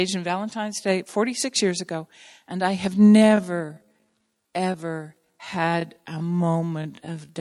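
Speech that abruptly drags from 3.06 s to the end at unchanged pitch: a time-stretched section slowed to 0.588x, likely stretched in software by repeating short pieces.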